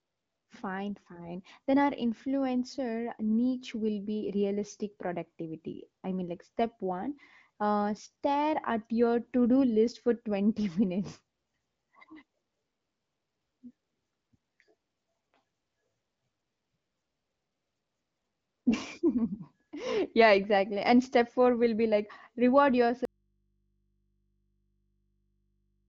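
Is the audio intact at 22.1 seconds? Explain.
Yes, the audio is intact at 22.1 seconds, with no fault at that moment.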